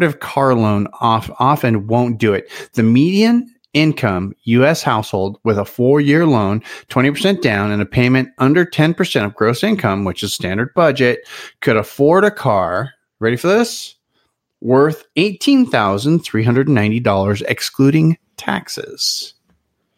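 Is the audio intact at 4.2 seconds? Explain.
Yes, the speech plays through cleanly at 4.2 s, with no dropout, click, distortion or other fault at that moment.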